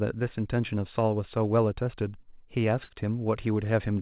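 Speech runs through a narrowband call path, with nothing above 4 kHz, which fits G.711. A burst of packet loss hits at 2.84 to 2.91 s. The receiver stretches the last sound for about 53 ms and fades it. Then the speech jumps ahead, with about 60 ms missing.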